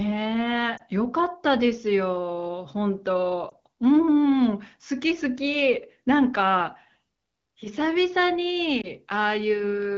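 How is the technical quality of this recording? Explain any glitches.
Three quick glitches on an AMR-WB (HD Voice) call. Those are lost AMR speech frames at 0.77–0.82 s, 3.50–3.54 s and 8.81–8.87 s. Each sounds like a short dip or warble, which fits one missing 20 ms frame. The decoder held the previous pitch and vocal tract settings at lower gain until good frames returned. The wideband coding stays clear, with only light codec colouring.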